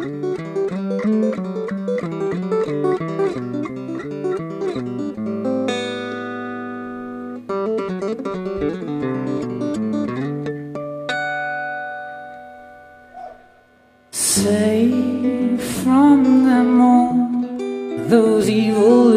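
No technical faults can be heard anywhere in the audio. Nothing drops out, breaks up or is otherwise disturbed at any point.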